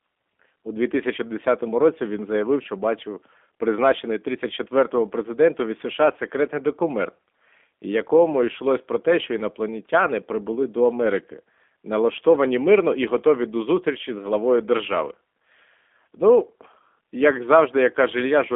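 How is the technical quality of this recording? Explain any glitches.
The technical quality is limited by one fault running through the whole clip. G.729 codec throughout: the speech is rebuilt from a filter, pitch predictor and sparse pulses, consistent with an 8 kbit/s link. This leaves it audibly rough and synthetic, and a spectrogram shows a band from 250 Hz to 3.5 kHz.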